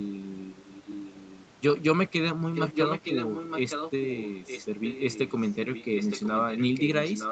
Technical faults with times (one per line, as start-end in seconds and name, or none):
2.54-4.67 echo leak
5.65-7.31 echo leak